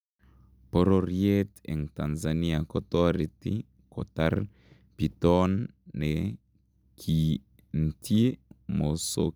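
Speech, with a block size mismatch (truncated) from 0 to 3.02 s: block ends are discarded, causing a 46.9 Hz buzz, fitting 1024-sample blocks, seen as regular waveform breaks and vertical spectrogram lines.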